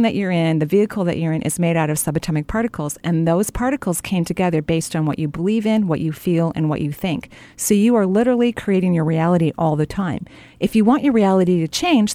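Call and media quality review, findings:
Block of digital silence at 2.23 s, just after "is made out of". Heard as a single tick. Roughly 2.8 ms of audio dropped out, with hard edges and no fade. Probable component: playback/render path, output buffer not filled in time. Waveform: flat line near zero, abrupt drop and return. Spectrogram: thin full-height vertical stripe, broadband click energy.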